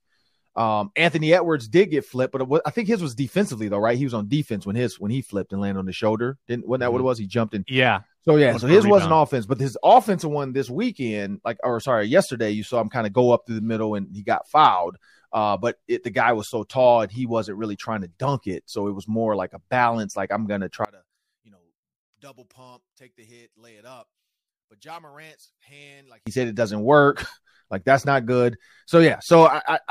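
From 20.85 to 26.27 s, just after "I'm gonna" and until "said it doesn't work", the speech collapses by about 28 dB into a faint residue. The likely cause is one channel inverted, so the shared centre content cancels when the channels are summed to mono.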